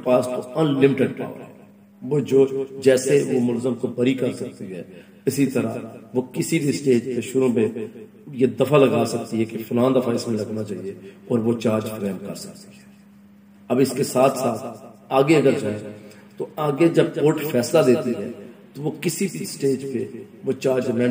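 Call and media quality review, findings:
No faults heard on listening; nothing in the audio stood out as a problem.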